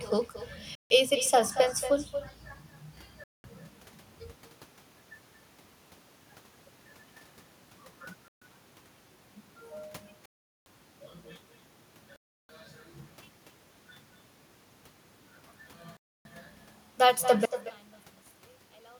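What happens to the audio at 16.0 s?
At 16.0 s the wireless link to the headphones most likely stalled. Interference seems to have held up packets until the headphones' buffer emptied, and playback had to wait for the resent data. The sound drops to complete silence from 15.97 s to 16.25 s, a gap of about 0.28 s, and then carries on. This is a Bluetooth stall.

The far end's loudspeaker is also feeding back into its microphone, and no echo canceller is removing it. The speech returns after a round trip of about a fifth of a second. Around this moment, as everywhere in the clip, each phrase is trailed by a quieter, thinner copy about 11 dB down. This is echo with no canceller.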